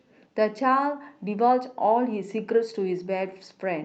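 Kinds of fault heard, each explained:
No faults are audible anywhere in this speech recording.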